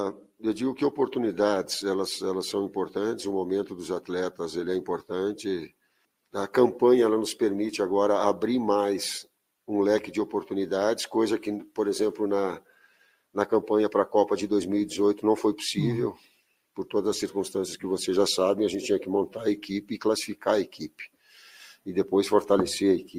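No technical faults can be heard anywhere in the audio.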